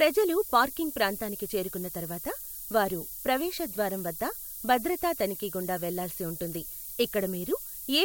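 Throughout the speech there is low bit depth with noise shaping. The steady, thin hiss brightens sharply toward the top, which fits roughly 6-bit quantization, sitting roughly 10 dB below the speech level.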